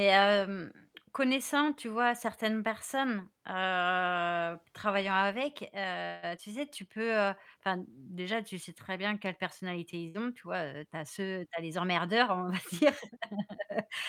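At 6.05 to 6.25 s the speech stops advancing and the last sound is stretched into a fading buzz or hiss for about 173 ms, then resumes exactly where it left off. This call audio freeze is likely caused by packets held up in transit, leaving the jitter buffer empty and adding a gap without losing content.

Shortly after, at 6.37 to 6.39 s, comes a short concealed packet loss. About 40 ms of speech is skipped, and the brief extrapolated fill is heard as a small smear or wobble. The jump forward also removes roughly 40 ms of the delay built up by the freeze.

At 10.08 to 10.16 s a burst of packet loss removes about 60 ms of speech. The receiver covers the hole with roughly 62 ms of continued, decaying sound, a held buzz or fading hiss, before the speech picks up further on with that stretch missing.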